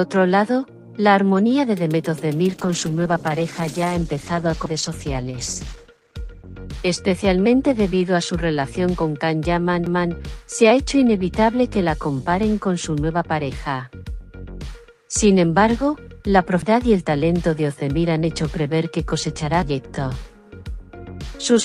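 From 2.48 s to 6.65 s a call bitrate drop sets in: the encoder's target falls from 48 kbps to 15 kbps after the bandwidth estimate collapses, so the audio is coded coarsely and its upper frequencies are trimmed, leaving a rough, muffled texture until the rate recovers. Inside that stretch, at 4.66 s, the first CD skip occurs, followed by three more at 9.86 s, 16.62 s and 19.63 s. At each, the pickup loses its track and lands on a different turn of the spiral, giving a mute lasting only a few milliseconds, a small tick, and playback resuming from a displaced point.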